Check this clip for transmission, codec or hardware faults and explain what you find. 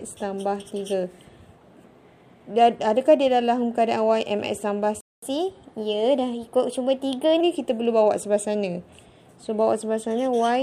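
Two playback faults appear, one straight after the other.

At 5.01 s a playback stall begins: the player likely ran out of buffered data or had its output thread blocked, so nothing reached the output. The sound cuts off mid-flow and stays silent for about 0.22 s, until 5.22 s.

From 5.22 s to 7.41 s comes catch-up at higher speed: to recover the lost time, the player resamples its backlog and runs it at 1.1 times normal rate. The sound is audibly quicker and sits roughly a semitone and a half sharp, then drops back to normal pitch and pace.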